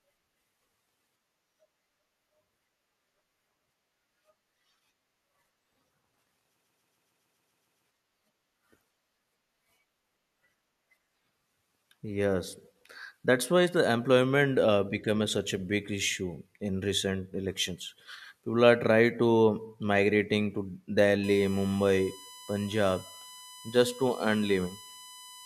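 At 6.60 s, a short run of compressed frames was written or sent again and again, and the decoder played the same 139.3 ms block nine extra times before moving on. These are repeated frames: the length fits a run of several frames. Through 7.85 s the speech stutters on that one fragment. The repeats add about 1.25 s to the running time.

From 21.24 s to the end of the clip at 25.45 s, current drawn by the USB bus in its 1 ms frames leaks into the audio through the power or ground path. This USB whine is a fixed-pitch tone based on 1 kHz, with its strongest component at the third multiple, 3 kHz. It sits about 20 dB below the speech, a thin, steady whistle.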